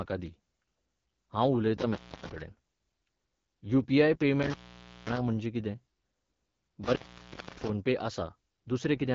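From the start the speech carries AMR wideband (HD Voice) codec damage, plainly audible. The 8.85 kbit/s rate is one of the lowest. The vocal-tract model codes speech only up to 6.4 kHz and fills the band above with shaped noise, so the voice sounds rough and raspy. A spectrogram shows nothing above 7.5 kHz.

An intermittent contact first breaks the line between 1.78 and 2.41 s, with an open stretch of about 280 ms. It breaks again from 4.43 to 5.17 s for about 530 ms, and from 6.84 to 7.69 s for about 620 ms. Each time a loose connection drops the signal, with crackle at the edges. On the waveform each gap shows as a near-flat run edged by sharp spikes.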